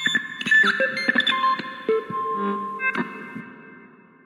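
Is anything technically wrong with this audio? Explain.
No, nothing technically wrong can be heard in this audio.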